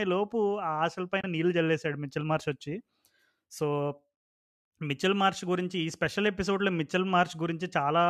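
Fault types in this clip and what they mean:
AAC frame loss with muting: A brief piece of the coded stream went missing, and instead of guessing at it the decoder just filled it with silence. Around 1.21 to 1.24 s the speech briefly drops out. The overlapping windows ease the level down and back up, so the gap has soft edges. About 30 ms of sound goes, which fits three short frames of a low-delay codec, likely AAC-ELD.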